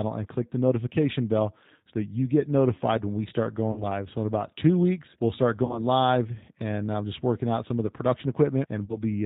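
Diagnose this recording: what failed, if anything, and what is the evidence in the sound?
The codec stage is the first culprit: this speech has been through G.729, running at 8 kbit/s, and the damage is plainly audible the whole way through. Nothing above 4 kHz survives, so it's dull and boxy, and there's that slightly rough, synthetic edge you get when the decoder rebuilds the voice from a vocal tract filter, a pitch predictor and a handful of pulses per frame rather than from the actual waveform.

Then there's the network: three spots of VoIP packet loss concealed by the speech codec, at 3.72 to 3.83 s, 5.65 to 5.80 s and 8.85 to 8.97 s. Each gap sounds like about 40 ms of missing audio, which fits a couple of lost packets. The decoder papers over it by stretching its last pitch and filter into a sound that fades out, and because every frame leans on the previous one, the voice stays weak and smeared for a beat or so after the audio resumes.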